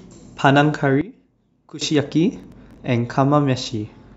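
From 1.01 to 1.81 s the speech drops by about 19 dB and turns faint and distant, with the centred voice largely cancelled. The likely cause is one channel inverted, so the shared content cancels when the two channels are summed to mono.

From 2.36 to 2.78 s a gritty processor overload crackle tears through the speech. The processor missed around ten buffer deadlines, and the pattern fits buffers of roughly 5 ms. Each missed buffer was skipped, leaving a hard-edged gap that adds to the crackle.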